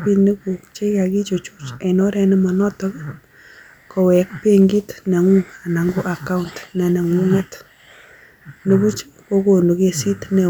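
Hard clipping hits twice: from 4.13 to 4.65 s, just before "neng'ung ana", and again around 8.72 to 8.75 s. Peaks overran the stage by about 1 dB and got sliced flat, so they crackle.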